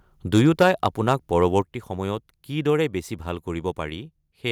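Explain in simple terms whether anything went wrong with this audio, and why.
Microphone overload appears from 0.33 to 1.13 s and again, more briefly, from 1.42 to 1.58 s. The loudest parts of the speech turn harsh and crackly, as if the sound were being squeezed flat at the top. The likely cause is a microphone input set too high, so the strongest peaks ran past the most the converter could handle and had their tops sliced off. The first stretch is clearly rougher than the second.

A microphone volume step-down comes during the first burst of distortion and right after the second, at 0.63 s and at 1.62 s. Both the voice and the background suddenly become quieter in one jump rather than fading smoothly. This is likely the calling software noticing the overloaded input and turning the microphone down on its own, each time right after or during the crackly peaks, as a quick fix for the clipping.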